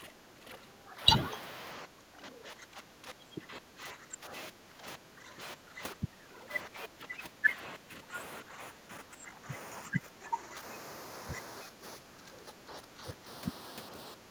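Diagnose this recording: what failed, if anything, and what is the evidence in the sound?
Channels drifting apart, at the converter stage. Throughout the clip, the summed sound has a slow flanging sweep. The two channels appear to run on separate clocks, off by around 20 ppm. Their offset creeps to a fraction of a millisecond, sliding comb notches through the spectrum.

Speech suppressed in double talk, in call processing. The speech dips by up to about 15 dB at 0.0–1.0, 1.85–4.33, 4.5–7.58, 7.77–8.14, 8.42–9.5, 9.88–10.62, 11.68–13.27 and 14.15 s to the end. The likely cause is an echo canceller that cannot separate the two sides and ducks both.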